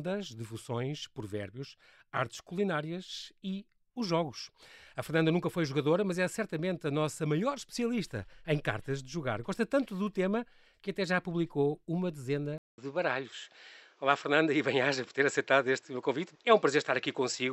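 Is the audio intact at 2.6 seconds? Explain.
Yes, the audio at 2.6 seconds is intact, with no audible fault at that moment.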